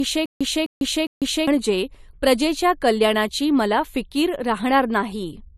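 From the very start until about 1.47 s, the speech suffers a stutter with silent gaps. The fault is already under way when the clip begins: a fragment about 257 ms long plays, then about 149 ms of dead digital silence follows, and the cycle repeats every 406 ms, three times in all. The likely cause is a stalled player or stream that replays its last buffered chunk at each retry and then runs dry. The audio meant for those gaps never arrives. What separates this from ordinary dropouts is the identical burst returning at a steady pace, rather than random holes in fresh material.

Throughout the clip, the speech is low-bitrate audio saved at a high bitrate. The file is a high-rate MP3, yet nothing sounds above 14 kHz, and the coding artefacts of a much leaner encode remain. The likely cause is an earlier low-bitrate pass, consistent with something like 48 kbit/s AAC, later re-encoded at a generous rate that preserved the damage without repairing it. 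Unlike a simple band-limited recording, the artefacts here belong to lossy coding, not to filtering alone.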